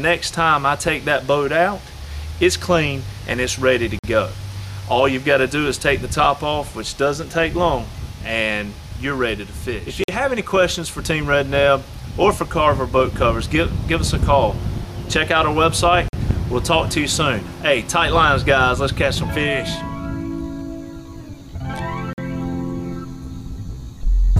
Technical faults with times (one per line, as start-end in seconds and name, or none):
3.99-4.04 gap between chunks
10.04-10.08 gap between chunks
16.08-16.13 gap between chunks
22.13-22.18 gap between chunks